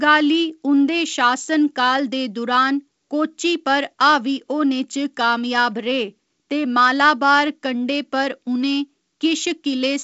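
Speech recording; no technical faults are audible.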